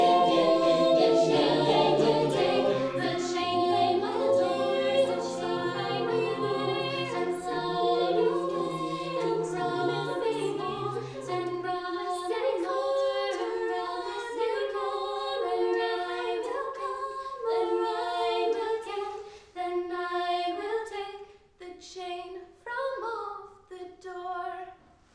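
Nothing in the audio points to a technical fault at any moment.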